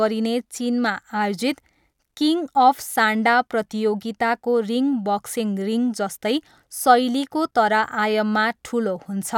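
No technical faults are audible.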